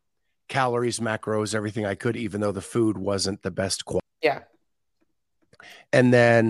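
At 4.00 s, after "food wasn't the best", a CD skip: the laser jumps spiral turns and speech lurches with a tick, showing as a tiny waveform gap and a vertical spectrogram line.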